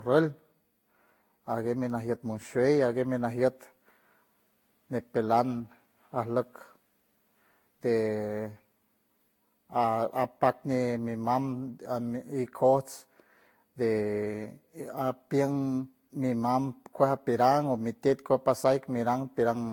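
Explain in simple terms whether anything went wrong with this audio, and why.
Generation loss runs through the whole recording. The speech sounds swirly, hollow and smeared, and consonant attacks blur. This is likely because it was compressed and decompressed around seven times in a row, each pass adding fresh distortion on top of the last.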